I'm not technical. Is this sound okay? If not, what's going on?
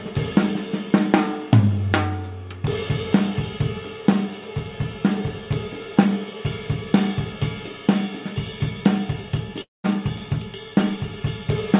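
No. At about 9.62 s the sound breaks off. What follows is a short buzzy tail that fades over a fraction of a second into near silence, and the audio picks up again at about 9.86 s with a piece simply missing. This is most likely a long network dropout: for roughly a quarter of a second no audio reached the listener, so the receiving end stretched out the last bit it had and then went quiet.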